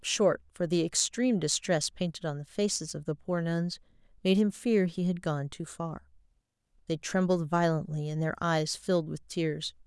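Speech recording with no technical faults detected: no dropouts, clipping, glitches or timing errors anywhere in it.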